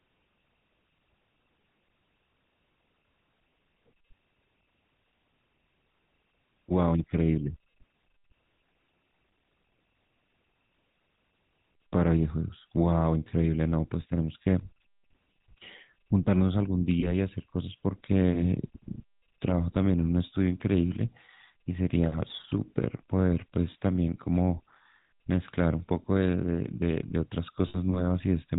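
From start to finish the speech carries the coarse, buzzy grain of the GSM full-rate codec, at a rate that fits 13 kbps. The codec keeps a vocal-tract model and feeds it a sparse, regularly spaced pulse train instead of the real excitation, so voiced sounds turn gravelly. Nothing above 4 kHz survives, which dulls sibilants. This differs from a plain low-pass or narrowband channel: besides the missing top end, the damage is a rough buzz in the voice itself.

At 17.0 s there is a short run of lost GSM frames, consistent with one 20 ms frame being lost. The decoder reuses the last good frame's settings, so the sound briefly smears into a metallic ring until about 17.12 s. A second loss at 27.68 s is longer, around 60 ms, and the held, ringing tone lasts to about 27.78 s. Unlike a dropout, neither gap goes silent. Unlike a click, neither is a sharp tick. Each is a brief sustained, tinny hold of the sound that just came before.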